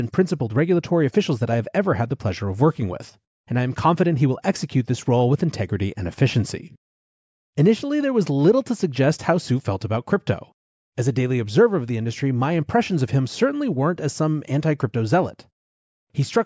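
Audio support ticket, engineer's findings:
No audible faults found.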